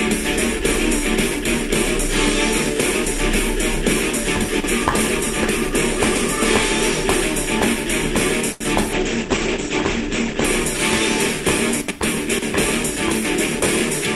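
At 8.52 s a short stall from a late packet holds the sound for about 84 ms until 8.63 s; unlike a dropout, nothing is skipped afterwards. From 8.93 to 10.50 s a call bitrate drop makes the audio rough and muffled, with the top cut near 8 kHz. This fits a fall from about 64 to 12 kbps and differs from a stall because the sound keeps moving.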